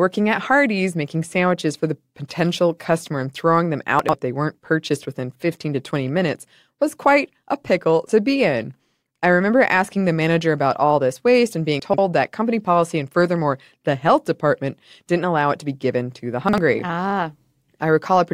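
Chunks out of order occur at 3.99–4.13 s, 11.80–11.98 s and 16.49–16.58 s. Blocks of about 46 ms play two, three and one positions late. The speech briefly jumbles.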